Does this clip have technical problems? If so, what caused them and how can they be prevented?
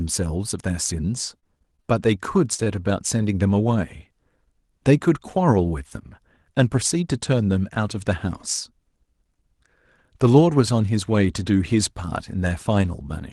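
Yes, there are four separate problems in this speech clip, all on the receiving end of a call, which sounds like it went through Opus with audio up to about 12 kHz.

From 1.39 to 1.95 s there's repeated packet loss, and you get that choppy sound with pieces missing. A string of short holes, the longest about 28 ms, each got patched by stretching the preceding sound, so roughly a fifth of that stretch is filler. Better network conditions or codec redundancy (in-band FEC) would help.

At 2.54 to 2.60 s there's a short concealed packet loss. About 40 ms of audio never arrived, and the receiver smoothed over the hole by continuing the previous sound, which leaves a brief smear where something was lost. Enabling FEC or retransmission would usually cover a hole this small.

Right after, from 2.64 to 2.68 s, there's a short stall from a late packet. The jitter buffer ran dry, so about 18 ms of sound got held until the packet showed up. 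Nothing's missing, just a slightly drawn-out moment. A bit more jitter buffer headroom would prevent this.

From 6.23 to 7.03 s the jitter buffer speed-up kicks in. To trim excess delay the receiver cut out tiny pitch-period slices, around 40 ms in total, so the speech runs about 4% fast at the same pitch. Steadier packet delivery keeps the buffer from overfilling.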